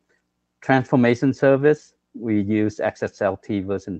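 No faults detected; the audio has the ordinary character of a call path, with content topping out around 8 kHz, which fits a call codec running at a wideband setting.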